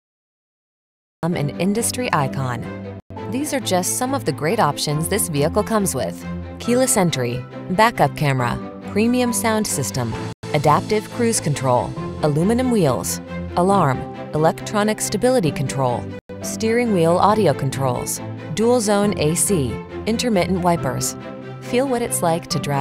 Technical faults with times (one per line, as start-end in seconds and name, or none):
0.00-1.23 cut-off start